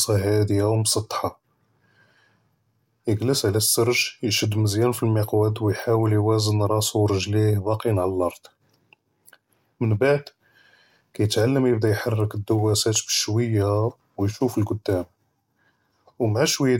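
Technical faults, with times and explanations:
No technical faults can be heard in this speech.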